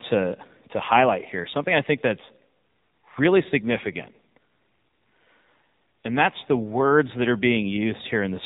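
The whole of this speech recording has passed through the AMR narrowband mobile codec, the 2G/3G phone coder that rebuilds speech from a vocal-tract model fed by sparse pulses and discards everything above 4 kHz. The damage is plainly audible from start to finish: the speech sounds boxed-in and telephone-thin, with a buzzy, synthetic edge, which fits one of the lower AMR-NB modes at around 7.4 kbps.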